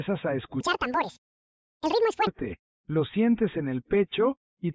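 From 0.61 s to 2.27 s the audio runs at a wrong sample rate: it is played back twice as fast as it was captured, so speed and pitch jump together, a full 12 semitones higher and hurried. The doubling fits material recorded at 8 kHz but clocked out at 16 kHz. On a spectrogram, every component in that stretch sits an octave higher, with content reaching up to about 8 kHz; the waveform looks compressed in time.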